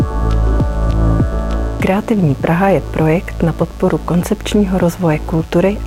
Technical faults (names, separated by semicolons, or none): DECT cordless phone buzz